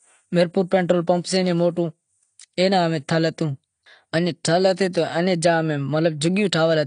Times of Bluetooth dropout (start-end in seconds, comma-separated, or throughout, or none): none